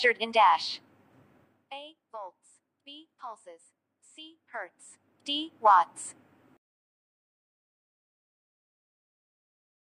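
No faults detected; nothing to report.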